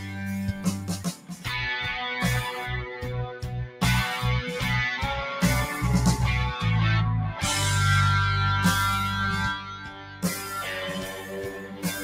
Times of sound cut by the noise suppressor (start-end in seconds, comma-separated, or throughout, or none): 0.00-0.20, 0.53-1.47, 3.67-3.82, 9.56-10.55, 10.99-12.03